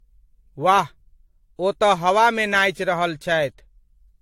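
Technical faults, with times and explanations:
Throughout: generation loss. The speech sounds swirly, hollow and smeared, with blurred consonant attacks and nothing above 16.6 kHz, likely from repeated lossy re-encoding, about four passes. A single encode at a similar bitrate would not pile up this much hollowness.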